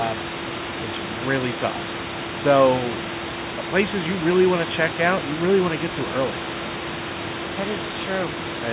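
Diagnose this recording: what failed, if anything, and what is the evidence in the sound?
Nothing failed; no faults are audible in this recording.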